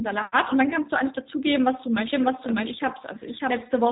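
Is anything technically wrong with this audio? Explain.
Yes, there are two problems.

Throughout the clip there's plainly audible G.729 codec damage, and the sound fits the 8 kbit/s G.729A variant. The codec doesn't store the waveform. It models the vocal tract as a filter, predicts the pitch, and rebuilds each frame from a handful of pulses. Nothing gets through above about 3.8 kHz, so the speech sounds boxed-in and dull, with a rough, slightly synthetic buzz on top.

From 2.13 s to the end there's a doubled audio track. A second full-band copy comes in abruptly and trails the original by roughly 0.7 s at about the same level, with no decay or room colour on it. It sounds like two clean overlapping versions of the same speech. The likely cause is the signal being picked up again through a slower path, or an edit that left two copies out of step.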